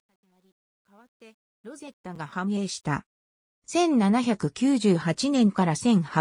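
From the start to about 2.97 s the fade shows truncation distortion. The fade stage kept only 11 bits and added no dither, so as the level nears the smallest step the waveform collapses into a few coarse square steps. The damage is worst from 0.0 to about 1.47 s, where the quiet part of the fade turns gritty, the low-level detail replaced by stepped, buzzy quantization error rather than a smooth fade.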